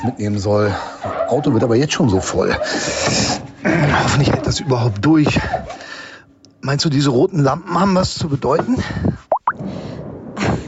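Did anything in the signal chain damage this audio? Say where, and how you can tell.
Yes: gain pumping, likely from input gain set too high into a fast limiter. Throughout, the gain swings around 10 dB, pulled down under loud sounds.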